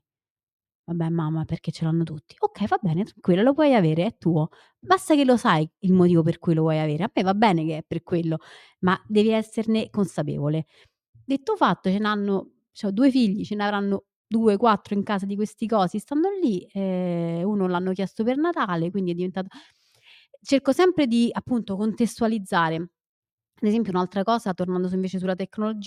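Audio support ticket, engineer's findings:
Listened to the whole speech recording and found no faults, so there's nothing to chase on this ticket.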